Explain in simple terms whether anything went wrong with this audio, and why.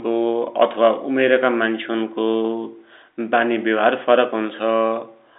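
Nothing went wrong; the telephone coding is working normally.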